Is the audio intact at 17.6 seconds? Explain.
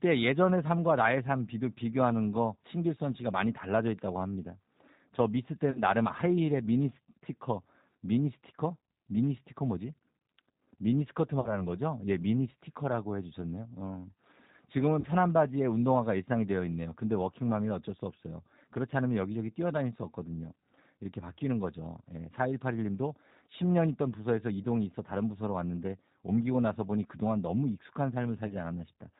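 No, G.729 codec damage runs throughout: speech rebuilt from a vocal-tract model and sparse pulses sounds rough and synthetic, cut above 4 kHz, unlike a plain low-pass, consistent with an 8 kbit/s coder.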